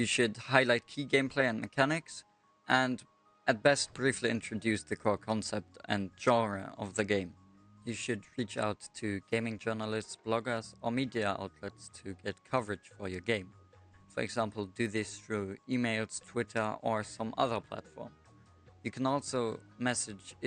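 Nothing stood out on listening to this clip.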